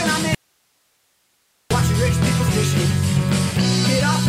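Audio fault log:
0.35–1.71 s, audio dropout to a faint residue: sound cuts sharply to hiss about 45 dB down for 1.36 s, likely a lost signal into a still-live path; the waveform flattens to a thin noise band.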